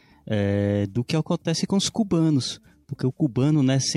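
No technical faults can be heard anywhere in the speech. There is nothing to mark at any point in time, since no event stands out from the surrounding audio.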